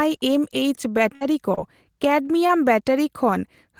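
A held buzz or fading hiss runs from 1.15 to 1.24 s in this speech, and about 60 ms of the real audio is then skipped. That is a burst of packet loss: several consecutive packets never arrived, so the receiver stretched the last sound for about 53 ms while turning it down, then resumed further along. Briefer smears or wobbles at 1.55–1.60 s and 2.47–2.52 s are short concealed packet loss. Around 20 ms went missing each time, and the decoder covered it by continuing the preceding sound for about 23 ms and 17 ms respectively before blending back. Inside these stretches, at 1.21–1.23 s, 1.57–1.59 s and 2.49–2.51 s, the audio turns rougher and noisier for 20 ms without breaking. That is a lost packet rebuilt from error correction, played from the low-bitrate copy carried in the following packet.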